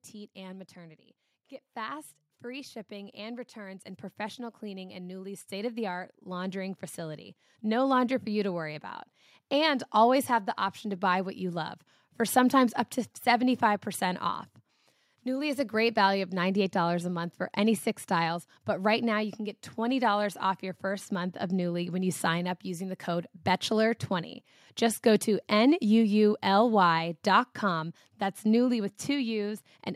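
You've got a speech recording with automatic gain rising through most of the first half: from about 0.13 s to 11.69 s the level creeps up by about 16 dB, voice and background noise swelling together. The gain control decided the input was too quiet and kept nudging its gain up over those eleven-odd seconds. It finally settles just before "for sometimes up to".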